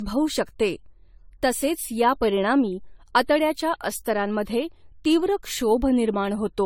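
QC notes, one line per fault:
Throughout, generation loss: the speech sounds swirly, smeared and hollow, with blurred attacks on consonant onsets and a watery, shifting texture in the sustained sounds. Nothing is present above 18.4 kHz. The likely cause is repeated lossy re-encoding, perhaps around seven passes through an AAC-type codec at a rate near 64 kbit/s. Each pass re-quantises on a shifted frame grid, so noise and spectral holes pile up beyond what a single encode would leave.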